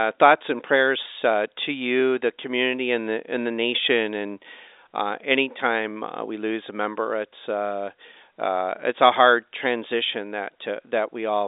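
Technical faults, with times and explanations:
No technical faults are present in this speech recording. It has been carried over G.711 telephone coding, which confines the sound to the line band of about 300 Hz to 3.7 kHz, and a faint level-following hiss from the coding may sit well under the speech.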